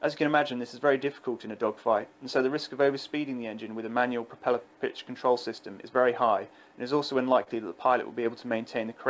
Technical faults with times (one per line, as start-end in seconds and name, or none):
7.43-7.49 short concealed packet loss